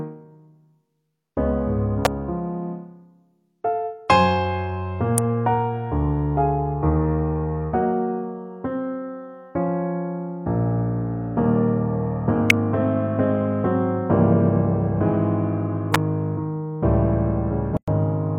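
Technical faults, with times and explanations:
2.05, 5.18, 12.50 and 15.94 s: electrical switching spikes. At each of these four moments a sharp snap, too brief to have any pitch, sits on top of the sound without interrupting it. Each lasts well under 20 ms and arrives with no build-up or decay. The likely cause is a nearby switch, relay or motor arcing, with the resulting burst of interference coupled into the audio line and added to the signal.
17.77–17.88 s: gap at a join of encoded pieces. The continuous sound drops out for about 108 ms and then resumes from the point where it stopped, with nothing missing. The edges of the gap are smeared, so the fully silent part is shorter. That fits two separately encoded segments joined end to end, where the first segment's padded final frame and the second segment's start-up delay were both left in and together form the hole.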